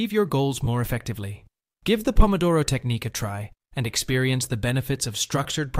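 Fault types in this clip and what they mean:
Lost LE Audio frames: at 0.65–0.68 s and 5.44 s, the LC3 decoder filled 20 ms and 10 ms gaps by reusing the last spectrum with random signs, leaving brief noisy smears.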